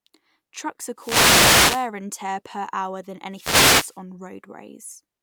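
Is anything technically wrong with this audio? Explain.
Yes. From 0.96 to 1.90 s and again from 3.31 to 3.99 s, a swish of static washes over the voice: a wireless microphone noise hit. Reflections cancel the FM radio signal, so receiver noise rises.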